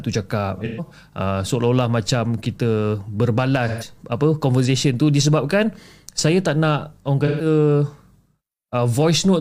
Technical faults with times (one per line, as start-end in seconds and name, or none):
0.56-0.93 AAC frame loss with concealment
3.68-3.88 AAC frame loss with concealment
7.27-7.45 AAC frame loss with concealment